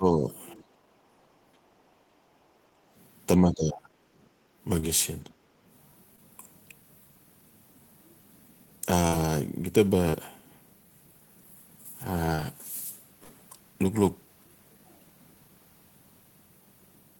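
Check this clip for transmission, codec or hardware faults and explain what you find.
There are four kinds of fault here: two spots of speech suppressed in double talk, two stretches of background gated by the echo canceller, four short concealed packet losses, and two bursts of packet loss.

Speech suppressed in double talk shows up at 0.0 to 0.31 s and 3.37 to 3.94 s. The talker drops by around 10 dB in the first spot and by a hefty 25 dB or so in the second. The likely cause is both ends talking at once: the echo canceller couldn't tell the near talker from the loudspeaker echo, so it pulled everything down together.

The background gated by the echo canceller happens at 0.59 to 2.93 s and again at 4.3 to 4.51 s. The room tone sinks by about 9 dB in the first stretch and about 11 dB in the second, then comes back up. That's the canceller clamping the mic while the far end plays through the speaker and releasing it when the far end stops. 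The longer stretch works out to roughly two seconds of dipped ambience.

Short concealed packet loss turns up at 4.79, 6.16, 10.10 and 12.35 s. Each one is a quick smear or wobble. Somewhere between 20 and 40 ms of audio never made it, and the decoder papered over the hole with 15 to 32 ms of extrapolated sound, carrying the last pitch or noise forward before blending back into the real signal. A consonant can vanish in one of these.

The bursts of packet loss, at 9.07 to 9.14 s and 13.24 to 13.31 s, are longer. In the first, 40 ms went missing and 47 ms was filled. In the second, 60 ms went missing and 54 ms was filled. You hear the last sound held as a buzz or hiss that fades, and then the audio jumps ahead with that bit gone.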